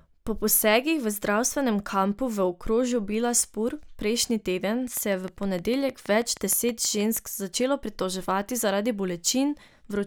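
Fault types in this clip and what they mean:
Train of clicks: about fifteen near-identical ticks at a steady 6.4 per second from 4.97 to 7.18 s after "prejšnji teden", peaking about 5 dB above the speech. Likely interference, not random crackle.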